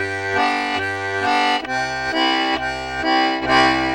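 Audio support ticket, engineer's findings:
Hollow, phasey coloration across the whole clip. Channel delay (comb filtering): one channel arriving roughly 3 ms late, then summed to mono. Shared content cancels at evenly spaced frequencies, first notch somewhere around 200 Hz. Probable component: stereo-to-mono downmix or misaligned channel path.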